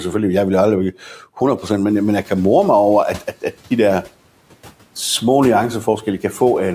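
From 1.88 to 2.49 s the noise suppressor is catching up. Room noise jumps about 18 dB near 2 s, the suppressor's estimate lags, and the noise leaks through before sinking about 7 dB over 610 ms. A spectrogram shows the broadband floor brightening, then gradually fading.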